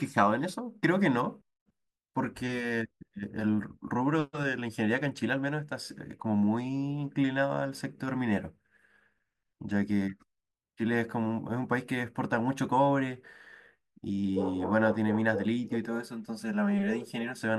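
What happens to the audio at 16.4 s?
The speech turns hollow and phasey from 15.87 to 17.41 s: channel delay (comb filtering), where one channel lags about 5 ms, notching evenly from around 100 Hz.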